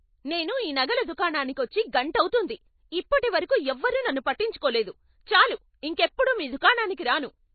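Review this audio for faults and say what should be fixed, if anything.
MP3 compression artefacts, throughout: nothing sounds above about 4.6 kHz, and the speech has a watery, swirling quality with smeared consonant attacks. This is likely a starved encoder cutting the treble and switching weak frequency lines on and off between frames, which fits a bitrate near 24 kbps. Keep a lossless master, or encode at a much higher bitrate.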